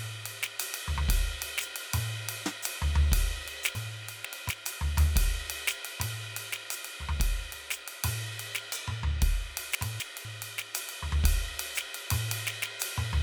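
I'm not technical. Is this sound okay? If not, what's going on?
No. The music has chunks out of order, at 3.75–4.5 s and 9.75–10.25 s. A quarter-second piece plays late, so the music briefly jumbles.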